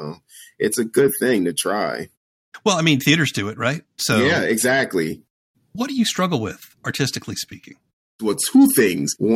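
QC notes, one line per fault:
1.08 to 1.11 s, corrupt frame decoded: between "it's a" and "thing to try", a brief chirpy blip of misplaced energy replaces the speech for about 22 ms, which suggests a couple of damaged frames. The decoder read flipped bits as valid gains and codes, so the energy landed at the wrong frequencies, peaking around -15 dBFS. A spectrogram shows a short vertical smear unrelated to the surrounding harmonics, and the waveform shows an abrupt burst with frame-aligned edges.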